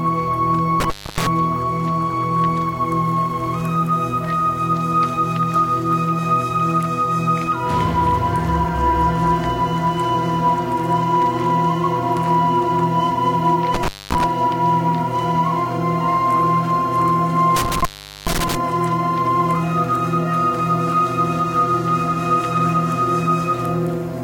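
A recording of everyday sounds suffers from intermittent contact, a loose cable or plug briefly opening the signal path three times: at 0.80–1.27 s with the line open for about 280 ms, at 13.74–14.24 s for about 230 ms, and at 17.56–18.55 s for about 415 ms. Each dropout is bracketed by crackle, with faint hiss in between. On a waveform the signal collapses to a near-flat line between jagged spikes. A spectrogram shows thin vertical broadband streaks framing a dark gap.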